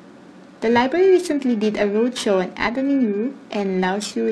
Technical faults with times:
0.00-4.31 periodic clock jitter
2.64-2.68 compressed frames skipped

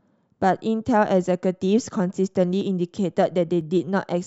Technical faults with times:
2.61 dropped buffer (overrun)
3.61 dropped buffer (overrun)

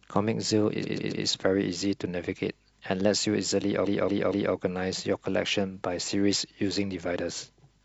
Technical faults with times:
0.79-1.21 repeated frames
3.81-4.51 repeated frames

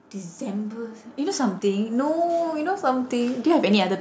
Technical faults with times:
0.12-2.84 automatic gain rising

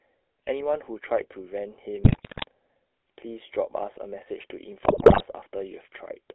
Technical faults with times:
0.00-6.34 GSM full-rate codec
2.04-2.44 GSM bit errors
4.84-5.22 GSM bit errors

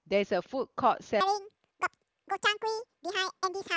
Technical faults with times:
1.21-3.77 section at the wrong speed

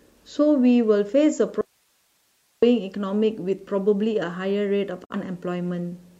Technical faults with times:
1.61-2.62 audio dropout to a faint residue
5.04-5.15 digital broadcast dropout

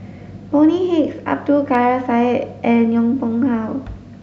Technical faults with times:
none

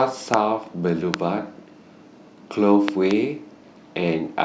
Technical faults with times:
0.34-0.36 loud pop
1.14-1.16 loud pop
2.88-3.13 loud pop

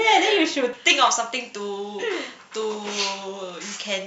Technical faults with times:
0.73-4.07 pre-emphasis left on

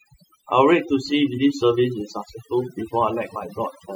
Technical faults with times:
0.00-3.96 overdone noise removal

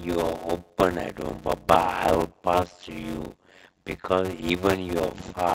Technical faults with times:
0.00-5.54 block size mismatch (padded)

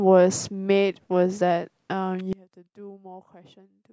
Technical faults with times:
2.33-3.92 one channel inverted

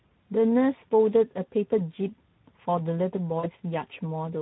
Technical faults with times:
0.00-4.41 Speex codec
3.39-3.47 VoIP packet loss concealed by the speech codec

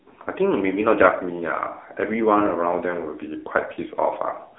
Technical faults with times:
0.00-4.58 AMR narrowband mobile codec

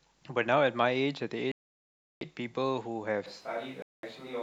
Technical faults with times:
1.52-2.21 Bluetooth dropout
3.26-4.43 switch to a distant microphone
3.82-4.03 Bluetooth dropout

